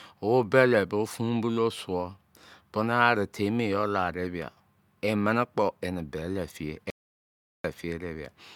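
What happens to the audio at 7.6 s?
At 7.6 s the speech is still in an audio dropout to silence that began at 6.90 s and ends at 7.64 s, so about 0.74 s of material is missing. The sound stops abruptly and resumes mid-flow, with no room tone in between, most likely because the input was lost while the recorder kept writing zeros. On a waveform this is a flat line; on a spectrogram, a dark vertical band across all frequencies.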